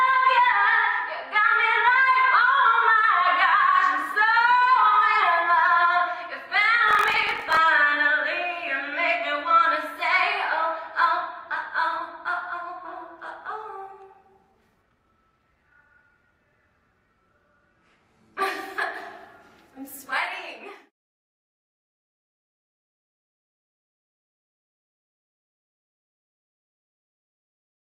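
From 6.86 to 7.59 s, a block size mismatch (truncated) discards the tail of each longer written block beyond the 1024 samples read, which fits the 46.9 Hz buzz heard alongside a 1.12× speed-up. That buzz separates it from smooth speed-ups.

At 12.85 to 12.87 s, playback makes a skip ahead. About a second of audio is lost and the two sides are spliced almost directly with no silence, unlike a dropout's gap.

From 14.45 to 16.46 s, a jitter buffer speed-up trims short pitch-period pieces, running the audio at 122% with unchanged pitch and about half a second removed. It has no buzz, which distinguishes it from truncation.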